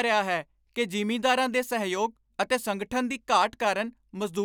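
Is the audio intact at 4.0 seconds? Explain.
Yes, the speech at 4.0 seconds plays through intact, with no dropout, click, distortion or other fault at that point.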